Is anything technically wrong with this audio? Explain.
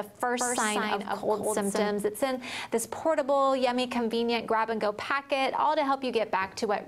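Yes. From 0.39 to 1.91 s there's a doubled audio track: a full-band copy trails about 200 ms behind, roughly 5 dB down, with no decay or room colour. It's likely a second, slower capture path, and the copy cuts in and out abruptly.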